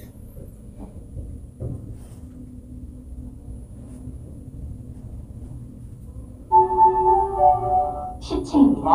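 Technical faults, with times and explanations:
No technical faults can be heard anywhere in this audio. There is nothing here that needs a time or an explanation.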